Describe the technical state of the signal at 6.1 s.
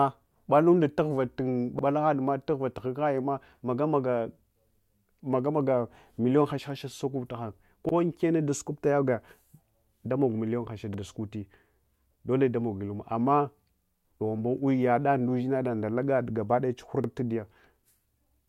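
At 6.1 s the speech signal is intact, with no audible fault at that moment.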